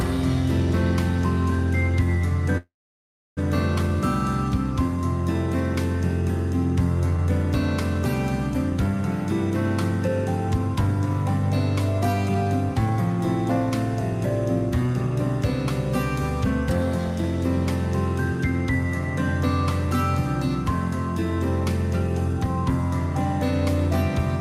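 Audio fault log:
2.57 to 3.39 s, call audio freeze: the sound stops short and the last moment is carried on as a fading buzz, then roughly 0.68 s of silence, before the audio resumes exactly where it left off after about 0.79 s in all. Nothing appears to be lost; instead a gap has been inserted, adding about 0.79 s of delay. This is likely packets held up in transit, leaving the jitter buffer empty until they arrived.
14.86 to 15.11 s, jitter buffer speed-up: for about a quarter of a second the audio runs noticeably quicker, around 117 percent of normal speed, while the pitch stays where it was, giving a brief hurried quality. The receiver trimmed a series of short pitch-period-length pieces, roughly 50 ms in total, to shrink a buffer that had grown beyond its target, which fits a backlog of packets arriving together.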